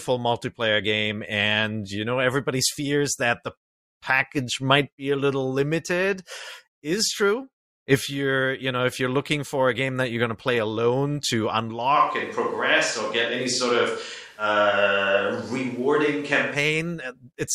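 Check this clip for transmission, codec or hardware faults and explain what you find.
One fault is present, a switch to a distant microphone, from 11.97 s to 16.54 s, just after "to play alone to". At that point the speech turns abruptly roomy and hollow, with thinner bass, while the overall level barely changes and a background noise floor becomes audible roughly 35 dB below the speech. The likely cause is that the close microphone dropped out and a farther pickup took over. The character changes instantly at both boundaries, which separates it from a talker drifting away from the microphone.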